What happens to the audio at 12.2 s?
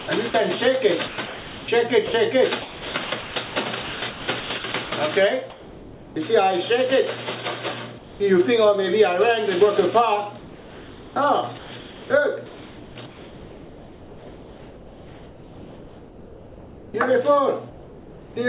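At 12.2 s the audio is in a stretch of sound chopped by the voice detector, running from 10.38 to 16.94 s. The likely cause is the sender's voice detector switching transmission on and off. Over about 5.6 s the real sound is swapped for comfort noise. The result is choppy.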